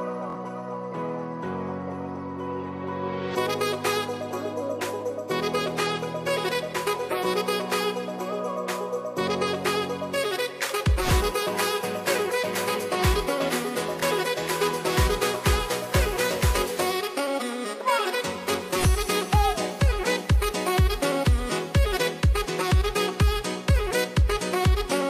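Repeated buffers at 0.30–0.35 s and 14.00–14.03 s: late audio made the device replay a 23 ms block (fitting a 1024-sample buffer) twice, then once, giving hard-joined stutters and losing about 50 ms and 20 ms.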